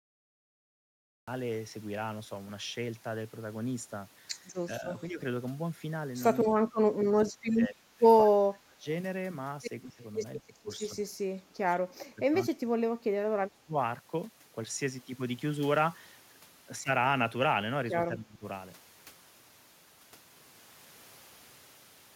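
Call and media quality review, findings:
Cut-off start: dead digital silence to 1.28 s, then the speech jumps in mid-sound with no attack or fade. Recording or stream kicked off late, so capture began partway into a sound already underway.

Speech suppressed in double talk: near-end speech ducks at 4.8–5.2 s, 6.48–8.86 s, 9.85–10.02 s, 10.45–13.76 s, 18.09–18.44 s. Dips around 10 dB at 4.8–5.2 s and 9.85–10.02 s, around 20 dB at 18.09–18.44 s, around 30 dB deepest at 6.5–8.9 s. Likely the echo canceller, mistaking overlapping talk for echo and pulling everything down.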